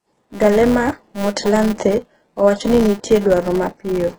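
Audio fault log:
throughout, HE-AAC compression (likely cause): the speech carries heavy codec damage. The treble is rebuilt from copied lower bands, so harmonics misalign and s sounds come out gritty and lispy. A spectrogram shows repeated-looking upper patches. The damage fits a bitrate near 12 kbps.
throughout, filter restarted on every block: a 200 Hz buzz runs under the speech. The filter starts each block from silence, adding a small transient every 5 ms. The buzz swells and fades with the speech level. The waveform shows evenly spaced spikes, and the spectrogram shows fine vertical striations.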